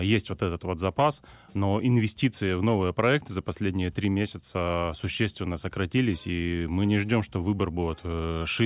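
No technical faults are audible anywhere in the recording.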